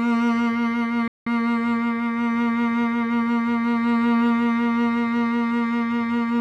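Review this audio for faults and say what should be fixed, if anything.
At 1.08 s the music drops out abruptly. Silence lasts 185 ms. The music resumes at 1.27 s. This is a playback stall. The player likely ran short of buffered data, or its audio thread was blocked, so nothing reached the output until it recovered. A larger playback buffer and a high-priority audio thread would prevent it.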